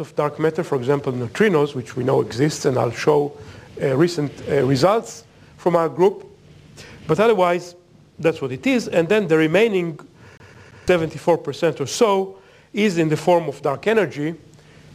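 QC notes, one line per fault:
10.37 to 10.88 s, CD stuck on one turn: the same 0.17 s slice of audio plays three times in a row, each restart marked by a brief mute, as a scratch knocks the laser back one track on every rotation, giving a fast, even stutter.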